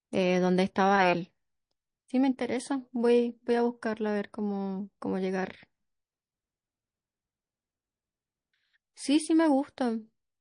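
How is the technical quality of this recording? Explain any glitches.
The recording is clearly degraded by heavy compression across the whole clip. Throughout, the speech sounds watery and swirly, with metallic chirps on s sounds. This is likely MP3 compression: starved of bits, the encoder cuts off the high frequencies and drops weak components that flicker on and off between frames, consistent with a low bitrate around 40 kbps.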